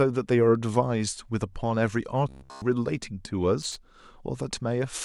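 From 2.29 to 2.62 s the voice collapses into a rigid, metallic buzz at about 66.7 Hz, still loosely tracking the speech. This robotic sound from repeated short buffers likely comes from a 15 ms segment being replayed while fresh audio was late, with essentially the whole stretch repeated.

At 3.62 to 3.76 s a short, irregular burst of crackle and scratching cuts through the signal. This is loose connector crackle, where an unreliable contact intermittently breaks the path, chopping the audio.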